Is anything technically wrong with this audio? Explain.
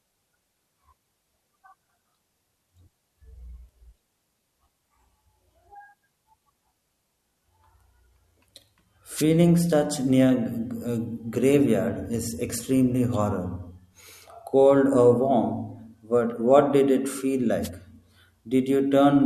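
Yes. Two wireless microphone noise hits occur in this speech, at 9.15 to 9.24 s and at 17.62 to 17.70 s, each under a tenth of a second. The analogue FM radio link fades briefly as reflected signals cancel the direct one, so receiver noise rises, heard as a short swish of static. A digital dropout would leave a gap of silence or a frozen repeat. Here the hiss fills the space instead.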